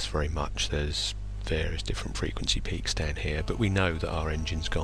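At 3.36 s a GSM phone buzz begins and runs to 4.79 s. A 2G phone nearby was in a call, sending radio bursts about 217 times a second. The audio circuit rectified those pulses into sound. The result is a raspy buzz at 216.7 Hz, rich in harmonics and unrelated to the rest of the sound. It sits about 22 dB below the signal. It holds nearly steady for its whole length, as a call does.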